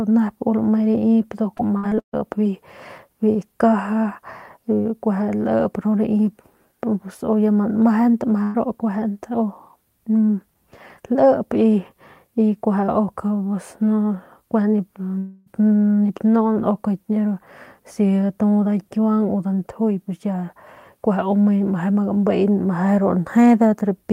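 It's a speech recording, and the trouble starts early: from 1.57 to 2.15 s there's a run of repeated packet loss that gives the voice that choppy, robotic edge. You can count five separate holes in just over half a second, each patched by stretching the last bit of sound, with the longest about 139 ms. Concealment covers 44% of that stretch, so around 260 ms of the actual speech never makes it through. Next, at 8.43 to 8.56 s, there's a single burst of packet loss. The receiver keeps extending the last sound for about 111 ms while turning it down, so it comes out as a short held buzz or fading hiss rather than silence. When the audio picks up again, roughly 120 ms of speech is missing from the middle. The third one, at 15.18 to 15.48 s, sounds like a longer version of the same thing: about 282 ms of continued, fading sound with no true silence underneath it, and roughly 280 ms of speech skipped when it resumes. 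At that length it's most likely a long network dropout, where nothing arrived for a few tenths of a second and the concealment had to carry the whole gap.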